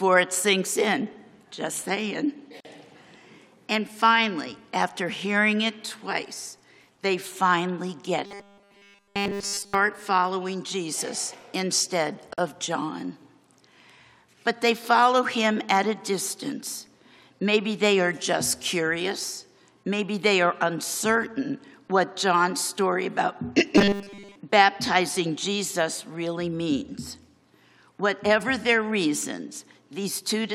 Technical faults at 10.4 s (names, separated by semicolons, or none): none